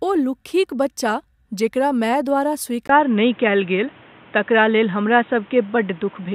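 At 2.87 s, just after "माय द्वारा", the recording likely switched its input to a poorer device. After a 20 ms silence, the speech loses everything above 3.8 kHz and turns dull and boxy to the end. Its level also shifts, and faint new background noise appears.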